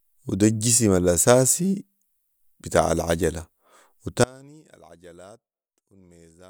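A break in the signal path, likely somewhere upstream of a stage that kept running, cuts off the speech at 4.24 s, and it never returns before the end of the clip. This is an audio dropout to a faint residue: rather than true silence, the gap holds a faint residue at something like 30 dB below the speech's normal level. The cut is abrupt, not a natural pause or a fade.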